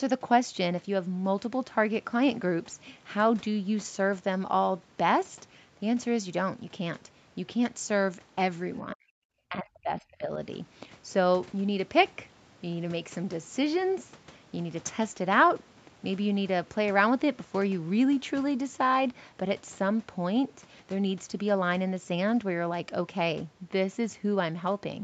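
From 8.94 to 9.11 s, and again from 9.49 to 10.31 s, the speech sinks sharply, by up to about 40 dB, then about 30 dB. This is likely speech suppressed in double talk, with the echo canceller muting the near talker. The waveform pinches thin, and the spectrogram shows dark vertical gaps.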